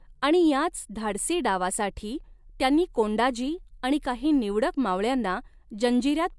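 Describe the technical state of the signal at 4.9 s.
At 4.9 s the speech signal is intact, with no audible fault at that moment.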